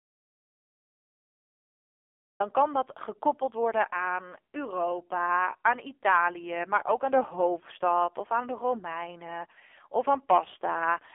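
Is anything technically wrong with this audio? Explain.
Yes, there are two faults.

Audio dropout to silence, 0.0 to 2.4 s: the clip opens in silence with no room tone, likely from the input being lost while the recorder kept writing silence. Speech only appears abruptly at "kan dat gekoppeld worden".

AMR narrowband mobile codec, throughout: the speech is squeezed into a 300 to 3500 Hz phone band, with nothing above 3.5 kHz. Heavy coding damage gives a buzzy, synthetic vocal-tract sound, consistent with a very low mode around 5.9 kbps.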